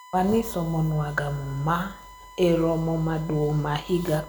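A USB whine runs through the whole speech clip as a steady tone at 1 kHz, roughly 20 dB below the speech. Its fixed pitch points to current drawn in 1 ms bus frames leaking into the audio path through shared power or ground.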